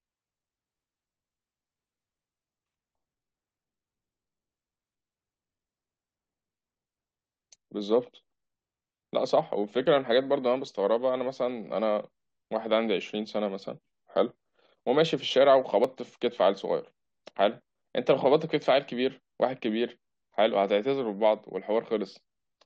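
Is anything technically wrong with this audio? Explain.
Yes, there's an overlap between stream segments, heard at 9.86 s and 15.84 s, about 6 s apart. Each time two segments' timestamps overlap, a few milliseconds of real audio get trimmed, and the waveform jumps, giving a small click or skip in the speech.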